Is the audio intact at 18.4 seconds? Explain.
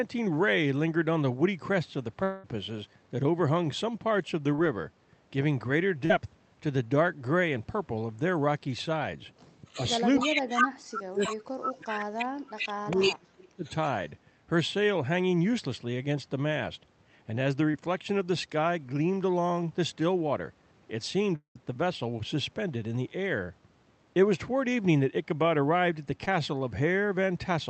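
Yes, the speech is intact at 18.4 seconds, with no dropout, glitch or other fault at that moment.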